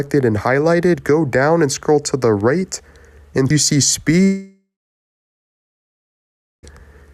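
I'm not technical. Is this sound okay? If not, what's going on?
No. At about 4.23 s the sound suddenly cuts out and does not return until about 6.65 s. This is a long network dropout, likely from the connection losing its audio for roughly two and a half seconds. Right after the cut you hear a short fading buzz as the player stretches out the last bit it received. Then there is nearly two seconds of silence. When the sound comes back, the missing part is gone for good.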